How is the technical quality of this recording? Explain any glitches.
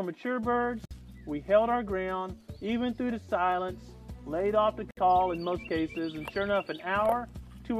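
Two short dropouts interrupt otherwise continuous sound. Gap at a join of encoded pieces, at 0.85 to 0.91 s (about 54 ms) and 4.91 to 4.97 s (about 64 ms), four seconds apart: separately encoded segments were joined untrimmed, leaving encoder start delay and end padding as silence with smeared edges before the sound resumes.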